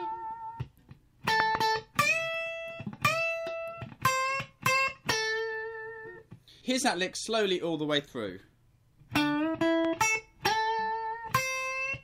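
Two sharp pops in quick succession land between 1.40 and 1.57 s, peaking around 20 dB above the surrounding sound, and a single softer pop follows at 9.85 to 9.87 s, roughly 10 dB above it. The sound carries on beneath both. These are loud pops, likely caused by a sudden voltage step or pulse, such as a plug, switch, static discharge or driver glitch, that was added to the signal and then shaped by the downstream circuitry into a brief thump.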